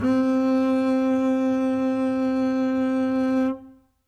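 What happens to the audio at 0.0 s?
Nothing goes wrong at 0.0 s: the music starts cleanly, with no dropout, click or distortion at that moment.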